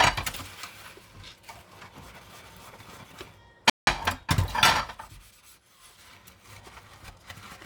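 Everyday sound cuts to silence from 3.70 to 3.87 s, a gap of about 174 ms, then carries on: a playback stall, likely the player running short of data.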